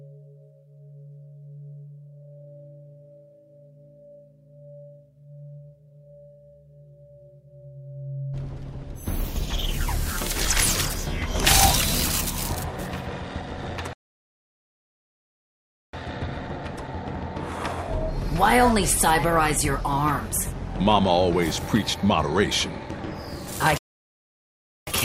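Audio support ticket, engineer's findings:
Playback stall: sound cuts to silence mid-flow at 13.93–15.93 s (2.0 s) and again at 23.78–24.87 s (1.1 s), then resumes. Likely output starvation: player buffer ran dry or playback thread blocked, output held silent until recovery.

Compressed frames skipped: small forward jump at 20.37 s and 23.47 s. Decoder dropping about one 32 ms frame each time (roughly 30 ms of audio lost), either missing from the file or rejected as corrupt.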